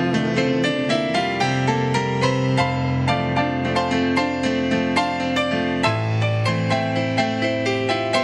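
No technical faults are audible anywhere in the recording.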